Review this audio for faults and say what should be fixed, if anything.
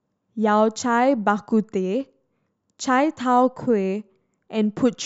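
No technical faults are audible in the signal, so nothing needs fixing.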